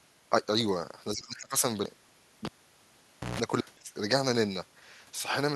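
From 1.14 to 1.62 s the speech level sags and breaks up, with about 0.4 s affected in total and the deepest dip around 20 dB. The likely cause is speech suppressed in double talk: with both ends active, the echo canceller could not tell the near talker from loudspeaker echo and attenuated both, so the voice thins and drops out in fragments.

At 2.45 s a pop marks a cable pulled and plugged in. Near silence follows for about 0.9 s. There is a roughly 0.15 s burst of 60 Hz mains buzz while only the plug tip makes contact, and a second pop at 3.40 s as the signal returns.

A brief, shallower dip, likely of the same kind, about 5 dB, appears from 3.83 to 3.88 s.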